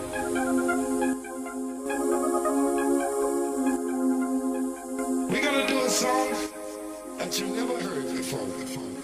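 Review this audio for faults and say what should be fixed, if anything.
The level falls abruptly by about 6 dB from 1.13 to 1.86 s, 3.76 to 4.99 s, and 6.46 s to the end; likely one channel drops out, halving the mono sum. Secure stereo connectors and monitor both channels before capture.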